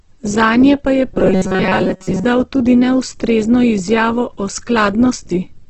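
Right from the start the speech has that grainy, rough texture of likely Opus compression in its music mode, squeezed hard enough to fit something like 12 kbps. The encoder has filled thin bands with noise rather than leaving holes, and there's nothing above about 8 kHz.

From 1.14 to 2.25 s it turns into a rigid metallic buzz at 188 Hz: robotic sound from repeated short buffers. That pitch fits a roughly 5 ms chunk looping, likely because audio arrived late, so most of that stretch is repeats rather than real speech.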